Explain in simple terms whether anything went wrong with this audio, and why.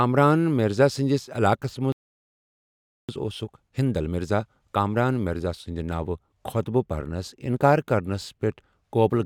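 The player likely ran out of data or was held up, causing a playback stall: the speech goes silent mid-flow from 1.92 to 3.09 s, about 1.2 seconds. To make up lost time, the player then did a time-compressed catch-up, trimming tiny slices. From 3.09 to 6.09 s the speech runs about 1.1 times faster at normal pitch.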